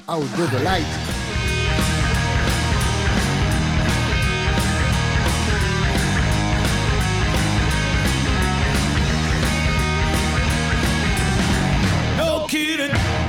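The signal holds steady throughout, with no audible technical faults at any point.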